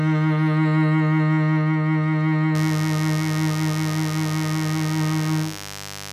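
Mains buzz enters the music at 2.55 s and runs to the end: switching spikes locked to 50 Hz mains leak in, sitting roughly 15 dB below the music as a raspy drone.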